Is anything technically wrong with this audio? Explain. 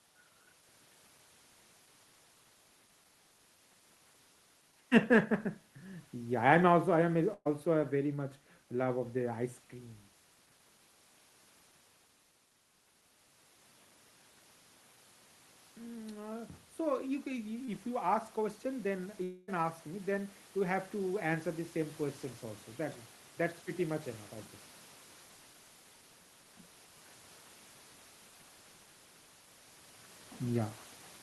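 Yes. This speech recording contains four kinds of fault.

From 7.33 to 7.47 s there is a burst of packet loss. About 120 ms of audio never arrived in time, and the receiver extended the last sound as a fading buzz or hiss, with a brief near-silence before speech resumes further along, the lost portion skipped.

The automatic gain is rising in two stretches: from 15.75 to 17.89 s by about 5 dB, and from 18.63 to 22.27 s by about 3 dB. The gain control judged the input too quiet and boosted it gradually, so speech and room noise swell together.

At 17.65 to 17.69 s there is a short concealed packet loss. Roughly 20 ms went missing and the decoder bridged it by continuing the preceding sound before blending back, heard as a quick smear or wobble that can swallow a brief consonant.

From 19.23 to 19.50 s the sound turns into a continued buzz or hiss that decays for about 240 ms, then speech picks up later with that stretch absent. 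The likely cause is a long network dropout, with concealment covering the whole gap rather than falling to silence.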